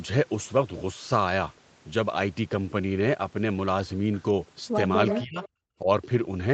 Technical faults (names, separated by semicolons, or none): echo leak; speech suppressed in double talk